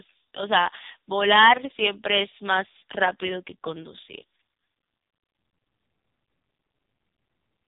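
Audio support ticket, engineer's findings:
Speech through an AMR narrowband mobile codec, start to finish. Hard ceiling at 3.8 kHz, nothing above. Buzzy, synthetic voicing, heavy codec damage. Vocal-tract model fed by sparse pulses per 5 ms, so thin bit budget = robotic texture. Artefact level points to one of the lowest AMR-NB modes, roughly 5 kbps. Probable component: mobile/telephony leg in the chain.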